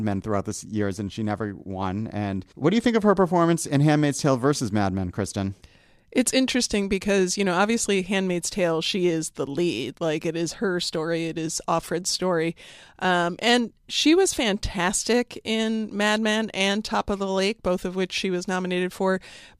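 No technical faults can be heard anywhere in the recording.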